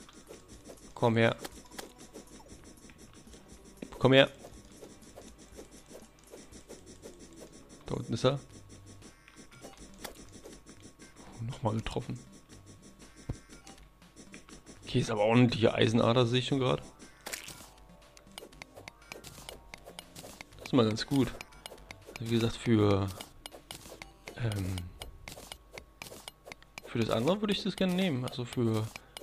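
No technical faults can be heard anywhere in this recording.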